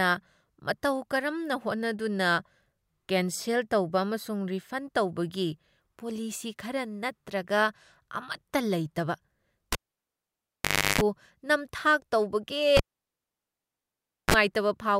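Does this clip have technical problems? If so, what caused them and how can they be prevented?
Yes. A cable pulled and plugged in: at 9.72 s and 12.77 s the speech pops, drops to near silence for 1.24 s and 1.52 s, then 50 Hz mains buzz (0.34 s, then 34 ms) precedes a second pop at 11.01 s and 14.34 s. Mute or power down before reconnecting cables.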